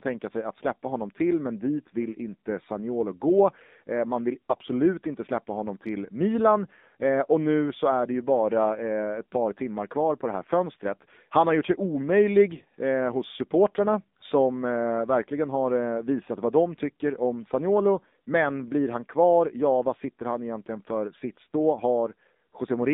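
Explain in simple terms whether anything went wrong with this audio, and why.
Two things went wrong. The whole recording has passed through the AMR narrowband mobile codec, the speech coder used on older 2G and 3G phone calls. It keeps only the range between about 200 Hz and 3.7 kHz and rebuilds the voice from a simplified model of the throat and mouth, refreshed every 20 ms. At the low quality setting used here, the damage is plainly audible: the speech sounds thin and boxy, with a buzzy, slightly synthetic edge.

From 4.50 to 4.63 s, between "man vill" and "inte släppa honom till", there are AMR bit errors. Over a weak radio link, some of the less protected data in a short run of frames arrived corrupted, while the check on the most important data still passed, so the phone played those frames instead of discarding them. Pitch and loudness stay roughly right, but for that brief moment the voice turns hoarse, scratchy and gargly.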